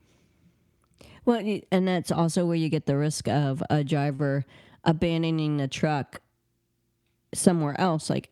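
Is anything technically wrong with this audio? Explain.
Yes. At about 4.15 to 4.21 s the speech has a short stall from a late packet. A packet arrived late, the jitter buffer ran dry, and the receiver stretched the last sound for about 38 ms until the packet came in. It then resumed from the same point, so nothing is lost, but the playout runs 38 ms later from there on. The sound is briefly held with a slight buzz or dip. On a spectrogram this shows as flat, smeared horizontal bands. The waveform shows a short stretch of repeated cycles.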